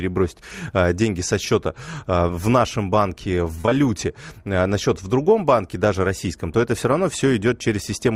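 Speech, with short concealed packet loss in three back-to-back events from 3.61 s to 3.73 s. Each gap is 20 ms, consistent with 20 ms packets. The receiver bridged them by extending the preceding sound, leaving a brief smeared wobble where real detail is missing.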